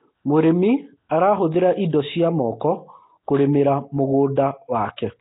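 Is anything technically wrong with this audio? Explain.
Yes. Throughout, the speech sounds rough and watery with a hissy halo, most likely Nellymoser compression at heavy damage, fitting roughly 16 kbps; the spectrogram shows nothing above 3.8 kHz.

Pre-echo occurs at 1.09 s and 4.36 s. Block-spread coding noise smears hiss 15 to 16 ms ahead of attacks, visible as noise just before each onset in the waveform.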